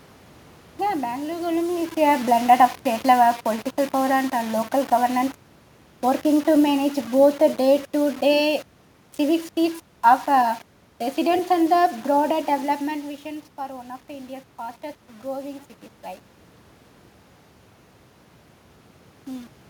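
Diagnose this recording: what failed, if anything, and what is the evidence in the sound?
Sample-format conversion likely cut the speech to about 6 bits with rounding and no dither, leaving grainy distortion that tracks the speech throughout, roughly 25 dB down.

Call processing applied automatic gain falling from 1.52 to 12.38 s. Gain drops about 8 dB after the talker moves, so speech and room noise sink together.

Automatic gain rising from 12.91 to 15.74 s follows a drop of about 12 dB as the talker moves away. Gain climbs about 4 dB, swelling speech and background together.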